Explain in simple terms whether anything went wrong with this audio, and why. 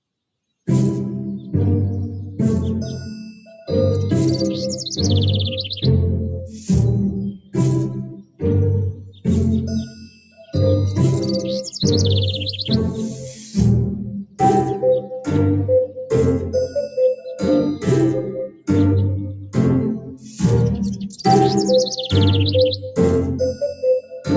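Throughout the clip, the sound keeps swelling and sinking in level, with sustained parts thinning out and sharp onsets poking through. That pumping comes from a noise suppressor applied to music or sounds: a speech-oriented filter mistook steady tones and lingering tails for noise and kept turning them down.

At 3.33 to 3.51 s, 6.47 to 10.44 s, 13.1 to 15.97 s, 16.88 to 21.22 s, and 22.85 to 24.28 s, the sound noticeably dips or fades away early. These are sounds cut by the noise suppressor, which treated held or decaying sound as background and pushed it down hardest.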